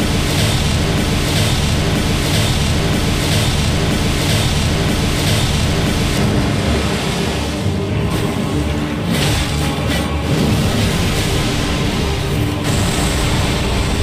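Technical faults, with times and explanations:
0.0 to 6.18 s, broken-record loop: already under way when the clip opens, a fragment of about 0.98 s repeats exactly, back to back, five times. The likely cause is a stalled player, encoder or stream resending its last fragment, so the audio meant for that stretch is lost.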